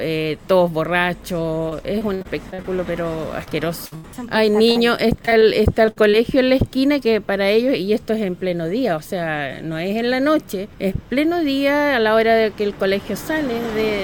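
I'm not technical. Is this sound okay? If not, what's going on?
No. From 1.69 to 2.66 s, 3.44 to 4.06 s and 4.72 to 6.15 s the sound turns choppy and robotic. This is repeated packet loss: chunks of audio went missing in transit, and each hole was patched by stretching the last bit of sound.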